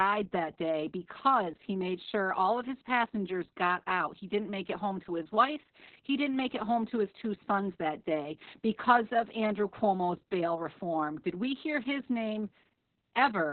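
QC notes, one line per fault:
Throughout: Opus voice compression, SILK narrowband with nothing above 4.3 kHz. Muffled, hoarse, slightly robotic speech, unlike a plain low-pass, suggests roughly 6 kbps.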